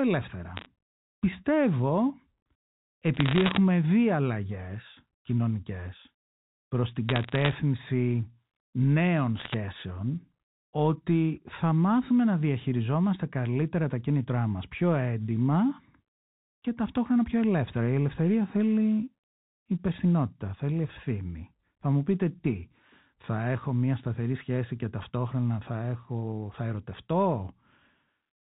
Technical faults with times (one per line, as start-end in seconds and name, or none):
0.56-0.66 bit errors on a digital phone line
3.14-3.57 bit errors on a digital phone line
7.09-7.52 bit errors on a digital phone line
9.37-9.54 bit errors on a digital phone line